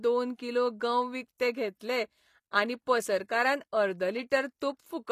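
Throughout the speech, the treble above the low band is likely rebuilt by HE-AAC compression's spectral band replication, at what sounds like a low bitrate near 24 kbps. The copied upper harmonics don't align with those below, so the codec damage is plainly audible, with nothing above 15 kHz.

From 1.79 to 1.81 s, a transform block spreads quantisation noise across its full length, so noise meant for a late, loud attack leaks about 24 ms ahead of it. This pre-echo puts a brief hiss before the onset and smears the attack.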